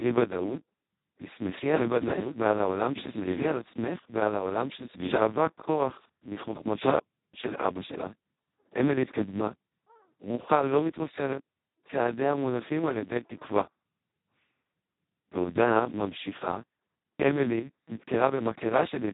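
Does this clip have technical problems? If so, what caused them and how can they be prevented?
Yes. Speex codec damage runs through the whole clip, from start to finish. The speech has been squeezed through a CELP coder at its very lowest quality, where almost no bits are left to describe the excitation, so voices come out hoarse, buzzy and robotic, close to vocoder sound. The damage is heavy enough to point to a setting near 2 kbps, and nothing survives above about 3.8 kHz. To prevent it, record or transmit at a much higher Speex quality, or use a modern codec such as Opus.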